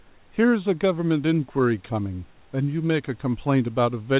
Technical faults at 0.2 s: none

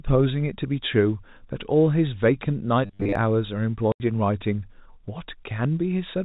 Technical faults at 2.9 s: robotic sound from repeated short buffers

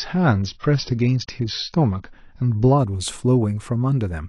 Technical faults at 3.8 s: none

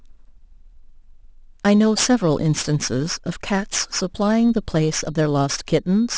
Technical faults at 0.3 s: aliasing

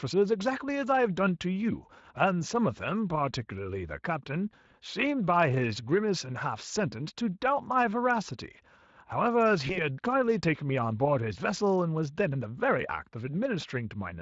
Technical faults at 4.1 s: none

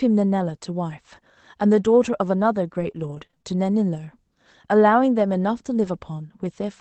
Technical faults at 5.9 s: lost packet rebuilt from error correction

